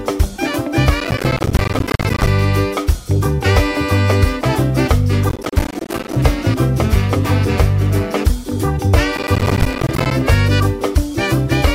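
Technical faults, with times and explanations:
1.00–2.27 s, 5.29–6.16 s and 9.17–10.11 s, processor overload crackle: the processor repeatedly fails to fill its audio buffers on time, dropping dozens over each stretch, and each miss leaves a hard-edged silent gap that fits buffers of around 10 ms. The rapid gaps form a gritty crackle that stops when the load eases.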